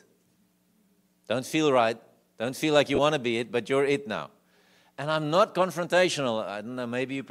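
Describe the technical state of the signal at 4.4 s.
At 4.4 s the speech signal is intact, with no audible fault at that moment.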